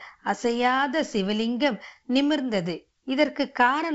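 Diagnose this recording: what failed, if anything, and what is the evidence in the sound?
On listening, nothing stood out in this speech, which comes through wideband telephone coding with its content reaching up to roughly 7.7 kHz.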